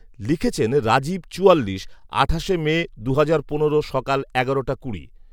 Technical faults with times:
2.00-2.03 repeated frames

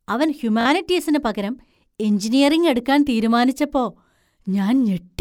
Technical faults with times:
0.61-0.65 Bluetooth stutter

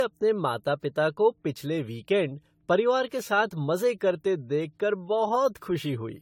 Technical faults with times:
0.00-6.21 generation loss

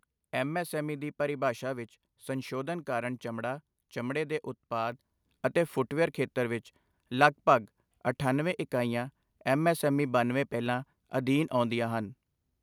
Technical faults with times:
4.92 microphone volume stepped up

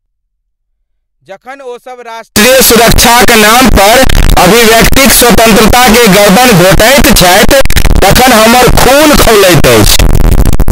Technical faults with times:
2.36-10.71 float read as integer

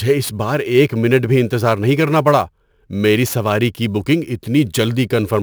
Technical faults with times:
0.00-5.43 sample clock jitter

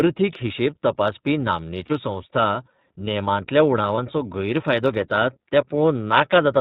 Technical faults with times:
0.00-6.61 iLBC codec
1.85-1.92 lost iLBC frames
3.96-3.98 lost iLBC frames

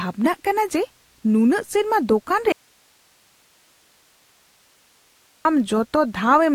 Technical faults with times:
2.52-5.45 audio dropout to a faint residue

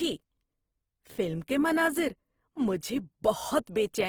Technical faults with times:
0.00-4.08 Opus compression

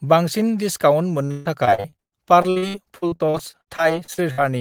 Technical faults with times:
1.25-4.40 repeated packet loss (robotic sound)

